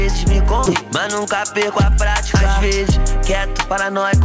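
At 0.66 to 0.68 s there's a skip ahead: roughly 0.7 s of audio got dropped in transit or tossed when the jitter buffer overflowed, and playback jumps straight across it with no gap filled in, so the two sides butt together abruptly.

Then come two rounds of jitter buffer speed-up, from 0.81 to 1.90 s at about 105% speed, and from 2.91 to 3.85 s at about 104%. The buffer was holding too much, so it shaved out tiny pitch-period slices, around 70 ms and then 40 ms in total. The pitch stays put, but the first round feels slightly rushed. Through all of it, nothing reaches above 8 kHz, which fits a wideband call codec like G.722.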